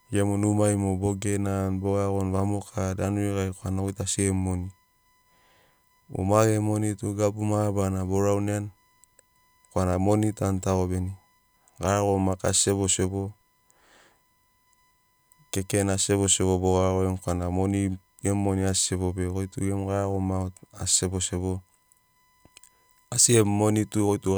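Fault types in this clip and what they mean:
USB whine: a steady tone at 1 kHz runs under the speech from start to finish, sitting well below it at roughly 45 dB down, with its energy concentrated at that fundamental. The pitch never drifts, which points to the USB bus's 1 ms frame timing. Each frame pulls a burst of current, and that repeating load couples into the audio path through shared power or ground wiring, leaving a fixed-frequency whine locked to the bus clock.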